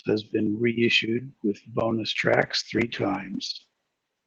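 From 2.44 s, just after "been reissued with bonus", a call bitrate drop from 32 to 14 kbps makes the encoder code more coarsely. The speech turns rough and muffled to the end.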